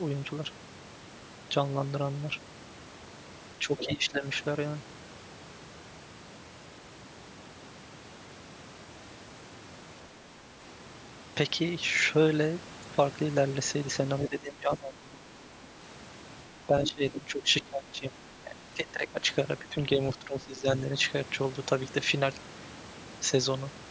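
A speech recording from a call, where the talker dips in level five times: 3.59 to 4.24 s, 14.29 to 15.42 s, 16.56 to 18.16 s, 18.36 to 19.2 s and 19.59 to 20.67 s. It drops by about 10 to 20 dB at worst, deepest in the 16.56 to 18.16 s stretch, and is most likely speech suppressed in double talk, with the echo canceller ducking the talker while the far end was speaking too. Around 3.79 to 3.9 s a short scrap of the other side's voice leaks through at about 10 dB under the talker, likely echo the canceller didn't fully remove.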